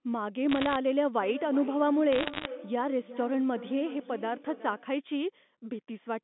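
From 0.51 to 0.76 s, bit errors on the digital phone line scatter sharp ticks over the speech: flipped bits in the G.711 stream corrupt single samples, and the rate sounds like roughly half a percent. Feedback echo between two devices runs from 1.2 to 4.99 s. A second device in the room replays the far microphone's signal, which that microphone recaptures, so each phrase returns roughly every 0.4 s, thinner and ringier with each pass, peaking at about 15 dB below the direct speech. Within that span, from 2.13 to 2.46 s, a denser burst of bit errors, near one percent, produces a heavier crackle.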